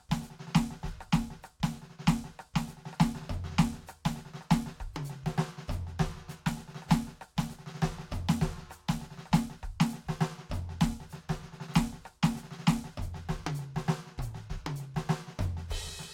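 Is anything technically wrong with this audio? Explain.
No, nothing technically wrong stands out here; the music simply carries on without any problem worth pointing to.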